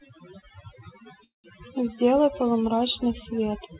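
A noise reduction stage set far too aggressively runs across the whole speech clip. It pulls individual frequency bands down hard wherever they sit close to its noise estimate, and the softer parts of the voice are removed along with the noise. The background drops and breaks up into twinkling specks. This is overdone noise removal, heard on top of a band that stops at 4 kHz, which points to a G.711 A-law call path.

From 1.24 s to 1.46 s there is a call audio freeze, most likely from packets held up in transit so that the jitter buffer ran dry. The receiver carried the last sound on as it faded, then gave about 150 ms of silence, roughly 0.2 s of filler in all. Speech resumes exactly where it broke off, with nothing lost, so everything afterward arrives about 0.2 s later.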